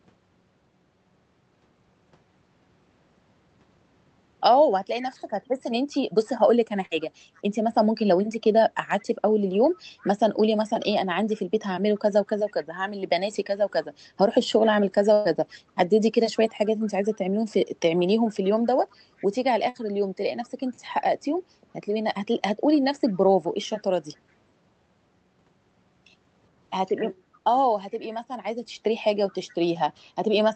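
Speech carried over a call path, with two faults. An echo leak puts a faint delayed copy of the talker, about 25 to 35 dB down and trailing by 421 ms, at 5.0–10.86, 11.95–12.65, 16.37–17.18, 18.45–19.27, 20.44, 22.74–23.79, 27.33–28.14 and 29.29–29.36 s. The likely cause is a loudspeaker echo canceller letting residue through. The fixed, distinct lag separates it from room reverberation, which smears continuously. Bursts of packet loss hit at 6.85, 15.13 and 19.69 s, removing about 60, 120 and 60 ms. Each gap is filled with a held, fading continuation of the last sound rather than silence, which marks it as concealment and not a plain dropout.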